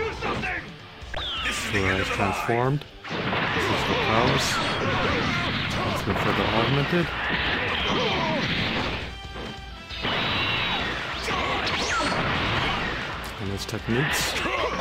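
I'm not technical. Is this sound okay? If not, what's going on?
Yes, the sound is in good technical shape, with nothing in the signal that points to a recording or playback problem.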